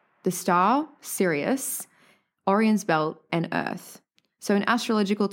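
No technical faults can be heard in this recording.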